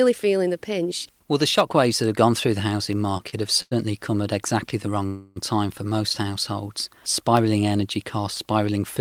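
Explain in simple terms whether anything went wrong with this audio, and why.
A few things went wrong here. Starting around 0.93 s, right after "feeling the", there are periodic USB or driver dropouts: once every second until the end, a tiny slice of sound is replaced by silence. It comes across as a steady tick, like something on the computer briefly hogging the audio connection on a timer.

Around the 3-second mark there are three short stalls from a late packet: at 3.17 to 3.22 s (22 ms), 3.30 to 3.34 s (26 ms), and 3.62 to 3.73 s (90 ms). Each time a chunk of audio showed up late, so the last bit of sound got stretched to cover the wait. Nothing is lost, but those moments sound briefly held or smeared.

The biggest one is a call audio freeze from 5.06 to 5.38 s, about 0.3 s. The sound hangs on as a fading buzz and then carries on exactly where it stopped, so nothing is missing but there's an awkward pause. 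That's likely packets getting held up on the network.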